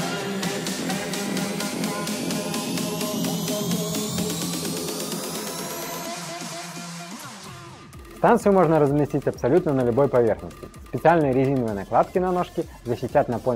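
Nothing in the recording stood out as a technical problem on listening.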